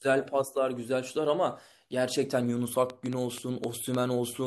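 From 2.90 to 3.96 s a train of clicks, about seven at an uneven 4.8 per second, ticks about 10 dB above the speech, likely from equipment interference.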